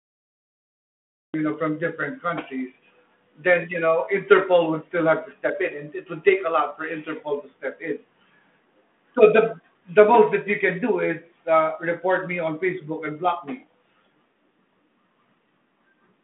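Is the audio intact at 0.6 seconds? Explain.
No. At 0.6 s the clip is still inside a cut-off start: from 0.0 to 1.34 s there is only digital silence, because capture began late, and the sound then cuts in abruptly in mid-flow at 1.34 s, just before "you know from different". Unlike a dropout, nothing precedes the gap, and unlike a fade-in, there is no gradual rise. The audio simply switches on with no natural attack, straight into the narrow telephone band.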